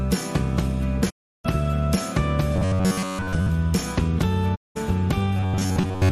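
At 1.09 s there's a digital broadcast dropout: the receiver stopped getting good frames and muted. The sound fades out over about 20 ms and stays silent until 1.46 s, so roughly a third of a second of audio is just gone.

From 2.56 to 3.49 s you get robotic sound from repeated short buffers. It's a stiff, metallic buzz at about 94 Hz that still loosely tracks the sound underneath. That's likely starved playback looping a roughly 10.7 ms chunk, with most of the real audio skipped.

A second dropout hits at 4.54 s, with the same quick 20 ms fade to silence, and the audio comes back at 4.77 s, leaving a gap of about 190 ms.

At 5.37 s the buzzy robotic sound returns at the same 94 Hz and runs to the end. It's likely the same short-buffer repetition as before.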